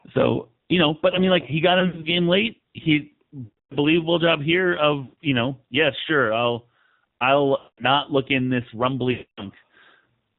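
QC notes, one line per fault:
throughout: AMR narrowband mobile codec. The speech is carried at a low mode that points to about 7.4 kbps, and the damage is plainly audible: a buzzy, synthetic edge where the pulse-driven vocal-tract model cannot keep up with the real voice. Everything above 4 kHz is gone. On a spectrogram there is a hard flat ceiling at 4 kHz with empty space above it, and the harmonics below look grainy and smeared.
1.80–2.09 s, 3.44–3.77 s, 5.04–5.19 s, 7.58–7.84 s, 9.12–9.44 s: lost AMR speech frames. The first event is scattered, with about 100 ms missing across 240 ms and no gap longer than 60 ms, so it sounds like brief dips and warbles. The others lose 260 ms (after "late he", before "job here"), 140 ms, 200 ms (before "look in this") and 260 ms (after "look in this"). In each gap the decoder repeats the last pitch and vocal-tract settings at falling gain, so the sound drags out, then fades within about 0.1–0.2 s and returns rough for a moment. 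On the spectrogram this shows as frozen, stretched harmonics that fade out, and on the waveform as a tapering envelope.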